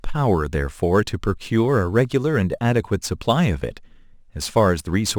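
Throughout the clip, the speech went through crude rate conversion: the sample rate was raised by nearest-sample repetition, with no interpolation or anti-imaging filter, in a ratio that fits a step from 44.1 kHz to 48 kHz. Every so often a sample is simply doubled, in a fixed cycle set by the two rates. That produces inharmonic fizz and grit, roughly 30 dB below the signal, riding on louder and brighter sounds.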